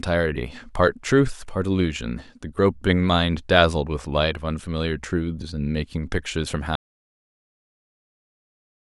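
A speech recording with an audio dropout to silence: at 6.75 s the sound cuts off abruptly and stays silent to the end, likely from a lost input. Unlike a fade or noise gate, there is no decay and no lingering room tone.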